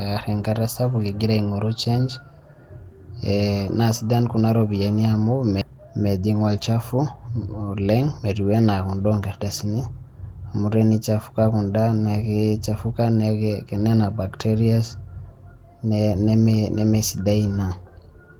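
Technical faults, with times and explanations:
5.61 s, skip ahead: the audio jumps forward with no silence at the join. Most of a second of speech is simply missing, and the sound before and after the cut meets almost directly. A stretch of audio was dropped while later audio was already waiting, so playback resumed from later material. This sets it apart from a dropout, which leaves an audible hole or a filled gap, and from a stutter, which repeats material rather than losing it.
5.70 to 7.20 s, jitter buffer speed-up: right after the jump, the speech runs about 12% fast for a second and a half, so it sounds hurried. The receiver was still holding more delay than it wanted, so it trimmed many tiny pitch-period-sized pieces in a row, removing roughly a fifth of a second in total. Because whole cycles are cut out, the pitch stays natural. A simple playback-rate change would have raised the pitch along with the tempo.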